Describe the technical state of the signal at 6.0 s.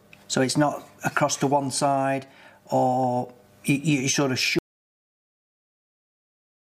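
At 6.0 s the signal sits inside an audio dropout to silence that begins abruptly at 4.59 s and runs to the end of the clip. The sound cuts off mid-flow and what follows is dead, digital silence with no room tone at all, most likely because the input was lost while the recorder kept writing zeros. On a waveform this is a flat line; a spectrogram shows a hard vertical edge, then uniform black.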